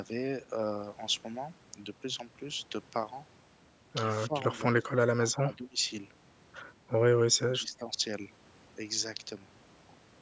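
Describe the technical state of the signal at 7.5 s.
At 7.5 s the speech is inside a suppression event running from 7.45 to 7.86 s. The level dips unevenly, falling by roughly 15 dB at its deepest, with about 300 ms of that span audibly pulled down or broken up. This pattern is likely speech suppressed in double talk: the echo canceller, unable to separate the near talker from loudspeaker echo while both ends were active, attenuated everything. The call microphone processing's 8 kHz band limit is present throughout.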